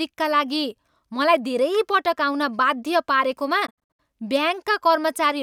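At 3.32 s an underrun with held sample freezes the waveform for under a millisecond. From 3.66 to 3.99 s the sound breaks into silent holes totalling about 213 ms, the longest 67 ms, likely a Bluetooth dropout, resuming as though playback continued.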